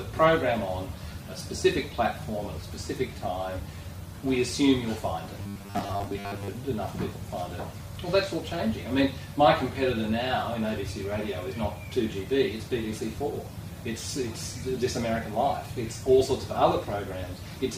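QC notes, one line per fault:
5.42–6.48 s, robotic sound from repeated short buffers: the sound collapses into a rigid, metallic buzz fixed at 100 Hz that only loosely follows the original, with most of this stretch made of repeats. The likely cause is audio arriving too seldom, so playback loops the last 10 ms chunk while fresh material is skipped. A spectrogram shows flat, evenly spaced harmonics at multiples of 100 Hz, and the waveform shows identical 10 ms cycles repeating back to back.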